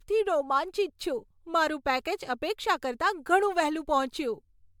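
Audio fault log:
Throughout: generation loss. The speech sounds swirly, smeared and hollow, more so than a single MP3 at around 99 kbit/s would explain. The likely cause is repeated lossy coding, about four passes of MP3 at roughly that rate. Each decode and re-encode quantises again on a shifted frame grid. Noise and spectral gaps pile up with every pass. Consonant onsets blur as a result. Nothing sounds above about 19.9 kHz.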